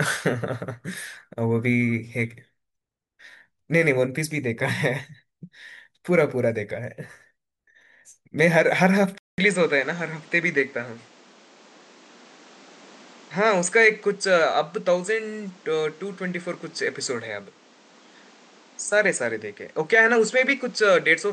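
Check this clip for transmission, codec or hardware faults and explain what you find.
One fault stands out. At 9.18 s the speech cuts to silence for 200 ms. When it returns, it sounds duller and boxier to the end of the clip. Nothing comes through above 8.7 kHz, and a new background noise sits around 30 dB under the speech. The loudness stays about the same. This points to an input switched to a poorer device, likely another microphone taking over. The narrower band and different noise floor come from that device.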